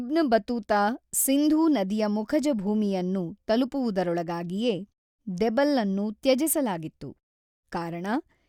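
No technical faults can be heard in this speech recording.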